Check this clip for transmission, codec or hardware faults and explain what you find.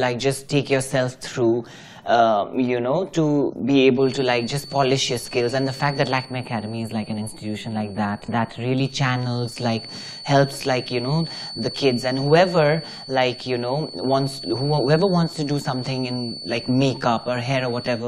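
Three faults can be heard: a persistent whistle, two brief stutters and a short hollow-sounding stretch.

Feedback whistle, 3.93 s to the end: a thin 4.5 kHz tone sits around 15 dB below the sound. A speaker-to-microphone loop at the edge of feedback is the likely cause.

Bluetooth stutter, 5.78 to 5.80 s and 8.26 to 8.29 s: a roughly 20 ms slice repeats once each time. This fits a single late packet replaced by the last buffer.

Channel delay (comb filtering), 6.25 to 8.78 s: one channel lags by a few samples, roughly a tenth of a millisecond. Summed to mono, it notches near 5 kHz and sounds hollow.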